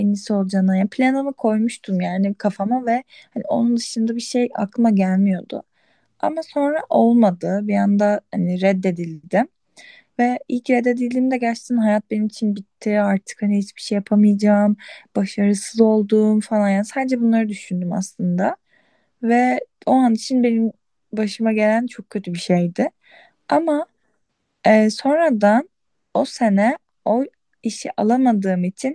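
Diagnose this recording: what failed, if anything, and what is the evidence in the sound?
Listening through the speech, nothing stood out as a failure at any stage of the chain.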